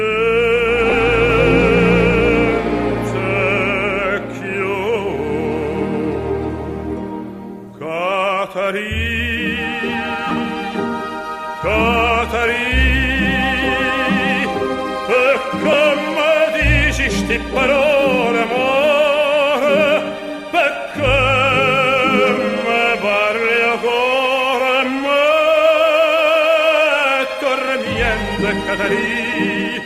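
Lost LE Audio frames cause three brief gaps, at 0.90–0.92 s, 10.29–10.31 s and 15.73 s. The first two last about 20 ms, the last about 10 ms, fitting dropped 10 ms frames. The LC3 decoder fills each gap by repeating the last spectrum with scrambled signs. Each sounds like a short noisy smear.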